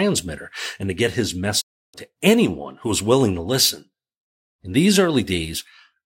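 From 1.60 to 1.96 s, a digital broadcast dropout fades the speech to silence over 20 ms. It returns with that stretch lost, not patched over.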